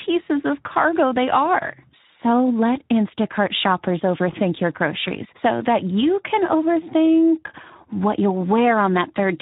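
A speech recording runs with Speex codec damage from start to finish. The voice sounds hoarse and grainy, with a noisy edge. Speex is a CELP codec that rebuilds speech from a vocal-tract model plus a coded excitation signal. Here that excitation gets too few bits, so the fine detail is replaced with rough noise. The damage is plainly audible, which fits a low setting near 11 kbps.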